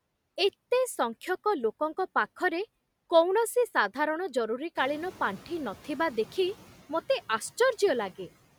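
At 4.75 s, after "ଲୋକଙ୍କ ପାଖରେ କୌଣସି ସାଧାରଣ", the noise suppressor is catching up to room noise that jumps around 5 s, letting it through. It sinks about 6 dB by 5.81 s, before "ଦେଖି ମୋତେ". On a spectrogram, the broadband noise floor brightens, then fades.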